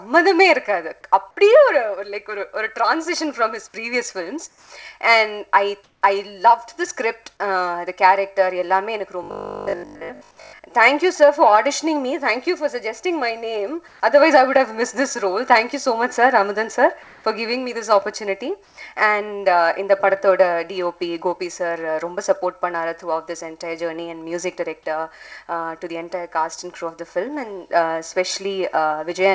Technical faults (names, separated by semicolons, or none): comfort noise in place of the background; robotic sound from repeated short buffers